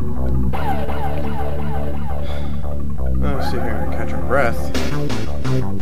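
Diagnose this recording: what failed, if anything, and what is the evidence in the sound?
The converter's sampling clock is unstable, which is sample clock jitter. Its timing wanders by roughly 2 µs rms, so each sample is taken a little early or late at random. Because the resulting error scales with how fast the waveform is changing, it appears as a hiss or roughness that follows the loud and high-frequency parts of the sound and drops away in silence. It is present throughout, sitting around 50 dB below the signal.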